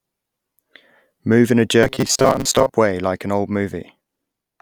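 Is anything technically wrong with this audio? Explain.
Yes. From 1.83 to 2.73 s, right after "in a" and before "way like an old", the speech turns into robotic sound from repeated short buffers. The likely cause is audio arriving too slowly, so playback loops the last fragment instead of waiting. Roughly half of that stretch is repeated material. The loop length fixes a rigid pitch near 133 Hz, which fits a buffer of about 7.5 ms. The result is a metallic buzz that loosely tracks the speech.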